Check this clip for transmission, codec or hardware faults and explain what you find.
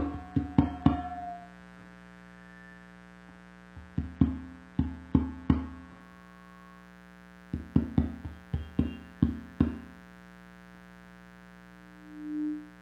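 Two faults are present: a buzz running through the whole clip, and reduced quality in the first six seconds.

Mains buzz, throughout: something in the signal chain, such as a dimmer, a rectifier or an unshielded cable, is letting sharp switching spikes into the audio twice per mains cycle. Here the mains frequency is 60 Hz, so the spikes produce a dense series of its harmonics climbing well into the kilohertz range. The result is a steady, raspy buzz sitting roughly 20 dB below the wanted sound, present from start to finish.

Adaptive stream starting at a low bitrate, 0.0 to 6.0 s: the player opened on a cheap, low-bitrate version of the stream so playback could begin quickly, then switched to a better one once it had gauged the connection. Until 6.0 s the treble is thin and partly synthetic, with nothing above about 12.3 kHz, which suggests a very low-rate HE-AAC stream around 16 kbit/s, and codec artefacts are more obvious. 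At 6.0 s the sound jumps abruptly to higher fidelity with no gap, consistent with AAC-LC at about 96 kbit/s.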